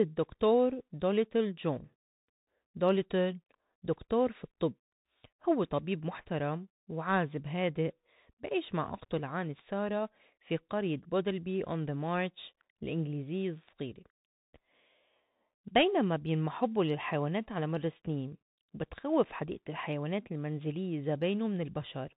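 A Bluetooth CVSD headset codec runs through this speech recording from start to finish, with plainly audible damage. The sound is squeezed into the narrow band of a Bluetooth headset link, with nothing above 4 kHz, which fits a 64 kbps CVSD stream. CVSD sends just one bit per sample, nudging the level up or down by an adapting step, so loud high-frequency sounds outrun that step and distort, s sounds turn scratchy, and a grainy hiss sits beneath the speech.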